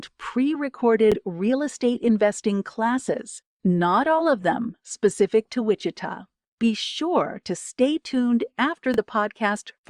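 At 1.12 to 1.16 s, just before "real estate investing classes", the speech catches in a short Bluetooth stutter. A slice of about 23 ms repeats, which fits one lost audio frame. The receiver replayed its last buffer while waiting for data. The result is a brief stutter. Speech then resumes a little further on. The same stutter returns at 8.94 to 8.98 s, just after "sure to stay tuned".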